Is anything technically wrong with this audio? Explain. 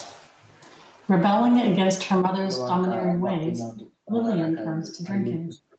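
No, nothing is technically wrong.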